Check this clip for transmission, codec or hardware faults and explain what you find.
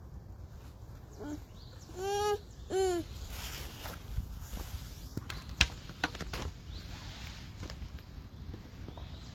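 One codec fault runs through the entire clip.

Transcoding between lossy codecs, present throughout: the audio has two overlapping sets of compression artefacts and nothing above 18.3 kHz. The likely chain is a Vorbis encode near 49 kbit/s re-encoded as HE-AAC near 40 kbit/s. The second encoder spends its bits on the first encoder's artefacts and adds its own, so the different artefacts are heard together. A spectrogram shows a hard ceiling at 18.3 kHz with patchy, blocky high-frequency texture.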